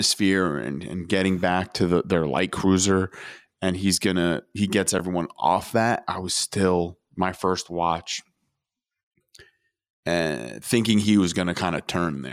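An underrun with held sample occurs at 4.98 s in this speech recording. The output buffer ran dry for about 9 ms, and instead of dropping to silence the converter kept repeating its last sample value, so the waveform sits flat. The speech simply stalls with barely a click. Since nothing was lost and playback picks up exactly where it paused, the return is soft, heard as a brief hitch rather than a sharp tick.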